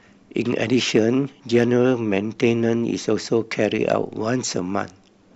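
Brief crackle on speech peaks at 0.96 to 1.00, 1.55 to 1.63, 2.18 to 2.47 and 3.92 s are hard clipping: peaks overran the stage's limit by up to about 3 dB and were sheared flat, adding bright harmonics.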